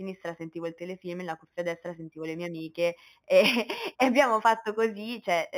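Throughout the speech, imaging from linear upsampling dulls the top end, with mirrored images near 4 to 8 kHz roughly 20 dB down, fitting an 8 kHz source interpolated to 48 kHz.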